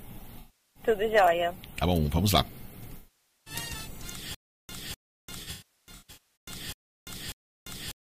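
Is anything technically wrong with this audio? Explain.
Yes, there are two kinds of fault. AAC frame loss with concealment appears at 0.39–0.83 s and 2.97–3.54 s, and again scattered across 5.42–6.18 s, with the longest single run roughly 150 ms. The decoder covers missing frames by rebuilding from the last good spectrum, so these patches sound smeared, noisy and phasey rather than repeated or silent.

Stutter with silent gaps runs from 4.35 s to the end. A 0.25 s fragment returns six times at an even 0.59 s period, with about 0.35 s of digital silence between repeats. This is likely a stalled stream replaying its last buffer. Unlike concealment, the burst is an exact repeat, and the gaps are true silence.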